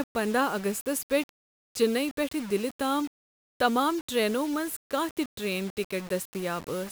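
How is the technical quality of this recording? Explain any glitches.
The quality is poor: the speech is grainy and rough for the entire clip, with a harsh distortion that rises and falls with the voice. Quiet syllables and word endings turn gritty and sputter, and the softest moments drop out to silence. The likely cause is low bit depth without dither, with the signal rounded to so few levels that it fits roughly a 6-bit signal. The rounding error follows the speech, landing only about 20 dB below it.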